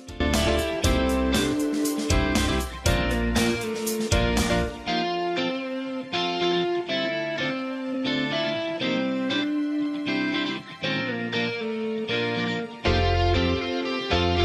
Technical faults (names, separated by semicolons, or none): compressed frames skipped